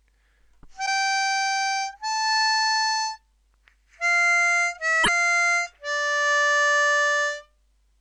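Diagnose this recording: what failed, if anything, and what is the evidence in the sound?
The codec stage failed, with damaged data in a compressed stream. Brief glitches at 0.82 to 0.88 s and 5.00 to 5.09 s show where corrupt frames were misdecoded while the decoder resynchronised. A spectrogram shows each as a short disruption that breaks the surrounding texture.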